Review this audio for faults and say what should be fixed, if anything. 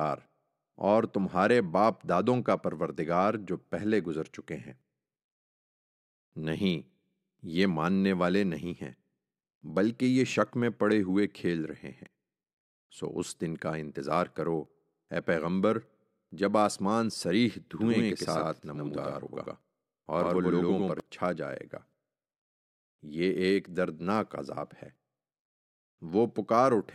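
A doubled audio track runs from 17.80 to 21.00 s. A second full-band copy of the speech trails the original by about a tenth of a second, at roughly the same loudness. It starts and stops abruptly, with no decay or room colour. The cause is likely a second, slower capture path or two out-of-step copies left in an edit. To prevent it, route each source through a single capture path and check edits for overlapping duplicate regions.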